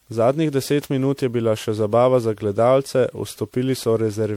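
From start to finish the speech sounds swirly and hollow, with a smeared, watery texture and consonant onsets that blur instead of landing crisply, more degraded than a single moderate-rate MP3 would leave it. This is generation loss, likely from the audio being decoded and re-encoded around seven times, with the character pointing to MP3 at about 96 kbit/s. Each pass requantised on a shifted frame grid, so noise and spectral gaps piled up.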